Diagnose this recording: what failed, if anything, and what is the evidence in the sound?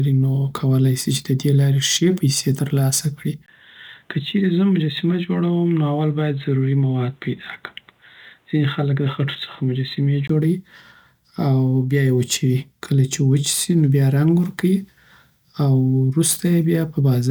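From 3.46 s to 10.29 s the speech turns dull and boxy, about 5 dB quieter, with a faint new noise floor roughly 45 dB below the signal, then clears again. A spectrogram shows everything above 4 kHz vanishing across that span, with a 20 ms gap in the waveform at the changeover. The cause is likely an input switched to a poorer device at the driver level, a narrowband microphone or headset call profile with its own tone, gain and noise.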